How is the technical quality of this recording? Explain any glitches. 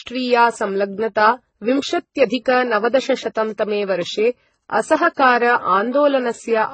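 The quality is poor throughout, with stacked codec damage. The chain was likely a transcoding between lossy codecs, a very low-bitrate HE-AAC stage re-encoded as low-bitrate MP3, the second stage spending bits on the first's artefacts. The speech carries the artefacts of both codecs heard together, and nothing survives above 8.3 kHz.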